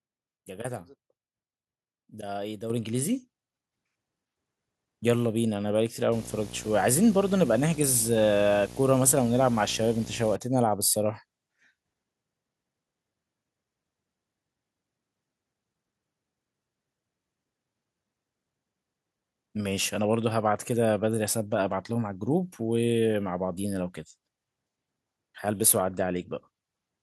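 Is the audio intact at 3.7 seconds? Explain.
No. At 3.72 s the microphone volume steps up: the level of the whole speech signal jumps by about 4 dB in a single instant and stays there. The pattern points to the call software judging the microphone input too quiet and raising the device's input volume in one move, rather than ramping it. Because the change happens before any processing, the voice and the background noise rise together.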